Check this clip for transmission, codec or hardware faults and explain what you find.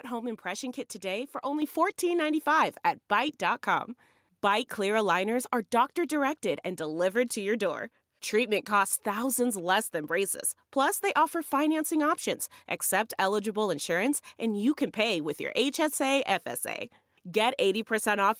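Two faults are present: a microphone volume step-up and a DC step.

At 1.62 s, just after "impression kit today for", the microphone volume is stepped up by about 5 dB. The call software judged the input too quiet and raised the device gain in a single jump, so the speech and the background noise both become louder at the same instant.

At 3.29 s there is a DC step: the waveform's zero line shifts abruptly to a new offset. The offset then drains away, as a 2 Hz high-pass would. The sudden shift is heard as a low thump while the speech continues unchanged.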